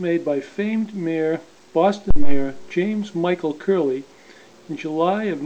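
Phantom power switched on or off on a live input sends a voltage step through the coupling capacitors: a deep phantom power thump from 2.11 to 2.54 s, peaking near -4 dBFS and decaying over 98 ms.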